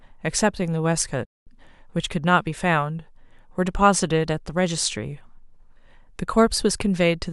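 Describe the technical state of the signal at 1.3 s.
At 1.3 s the player is in a playback stall, likely starved of data, so the speech cuts out mid-flow into silence from 1.25 to 1.47 s, about 0.21 s.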